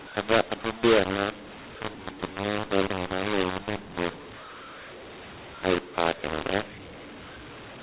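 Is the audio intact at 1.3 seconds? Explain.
No, at 1.3 seconds you're hearing the mu-law and A-law mix-up that runs through the whole clip: the speech was coded as A-law G.711 but decoded as mu-law, so sample levels get scrambled. The speech comes out harsh and distorted, and the quiet gaps fill with noise.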